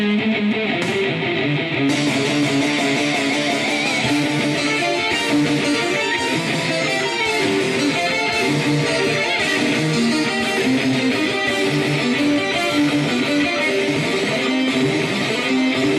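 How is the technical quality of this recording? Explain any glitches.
The technical quality of this recording is sound, with no glitches to explain.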